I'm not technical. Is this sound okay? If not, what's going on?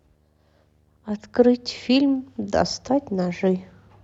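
No. Under the speech, from start to finish, there's a faint buzz: video or display buzz, where a screen or its cable leaks into the audio. It repeats 75 times a second, the screen's refresh rate, rather than mains hum's 50 or 60, and carries a gritty hiss above it.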